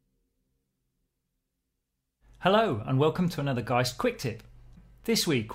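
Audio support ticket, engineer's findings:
No transport or processing faults found on this signal; nothing to escalate from the audio side.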